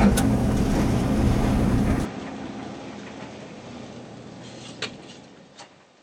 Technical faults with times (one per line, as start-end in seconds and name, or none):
2.05-6.02 input switched to a poorer device